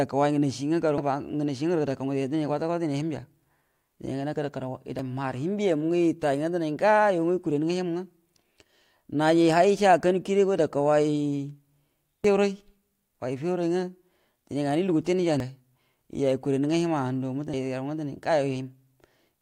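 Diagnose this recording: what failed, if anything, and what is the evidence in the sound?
The codec stage failed, with damaged data in a compressed stream showing up as five brief, isolated disturbances in the speech at 0.98, 4.99, 12.24, 15.40 and 17.54 s. At each point corrupted bytes leave the decoder unable to read a frame correctly, so it loses sync and hunts for the next valid frame header. Unlike a plain dropout or a converter click, each event is a momentary decoding error.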